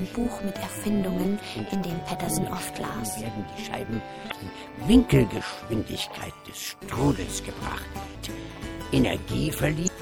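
A faint, steady whine runs under the whole recording, pitched at 1 kHz with its strongest component at the 3 kHz harmonic and sitting roughly 45 dB below the signal. This is USB whine, where the bus's 1 ms frame activity leaks into the audio through power or ground; on a spectrogram it shows as thin horizontal lines at 1 kHz and 3 kHz. The audio also has a plainly watery, swirling quality with smeared attacks, likely from MP3 compression at a low bitrate, consistent with about 64 kbps. Starved of bits, the encoder cuts the treble at a fixed frequency and drops weak spectral lines that blink on and off from frame to frame, so a spectrogram shows a hard ceiling and patchy, flickering high bands. On top of this, an overlap-add ripple makes the level pulse by about 11 dB at around 200 Hz, heard as a metallic buzz with extra tones around each note. It comes from windowed frames being rejoined with an overlap that doesn't sum to constant gain, and the waveform envelope shows regular scalloping at that rate. 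Damaged data in a compressed stream causes short chirps or blips at 4.27–4.33 s, 8.14 s and 9.84–9.88 s, where the decoder loses sync on corrupted frames and jumps ahead to the next header. On a spectrogram each appears as a brief vertical smear, and the waveform shows an abrupt discontinuity at each point.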